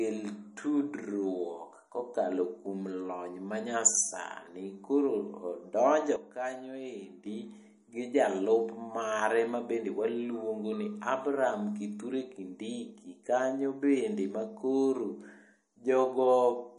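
A watery, swirling quality hangs over the speech from start to finish, with sibilants turning metallic and chirpy and consonant attacks blurred, while everything above 10.6 kHz is simply absent. This is plainly audible MP3 compression, likely from encoding at a low bitrate in the region of 40 kbps. Short of bits, the encoder cut the treble at a fixed point and dropped quiet frequency components that flicker in and out between frames, producing the swirl.

At 6.16 s the whole signal drops abruptly by about 10 dB, speech and background noise together, and at 7.26 s it jumps straight back up. This is a sudden gain jump, likely a digital level change applied instantly with no ramp, so the level steps in a single sample rather than fading. Because the noise floor moves with the speech, the change sounds like a switch being thrown rather than a natural drop in loudness.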